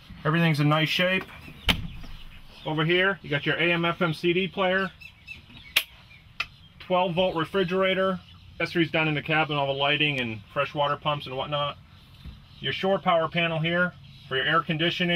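A stream segment skipped at about 8.59 s: the audio jumps abruptly forward with a brief blip. The likely cause is that one segment of the segmented stream failed to load and the player carried on with the next, so that stretch of programme is missing.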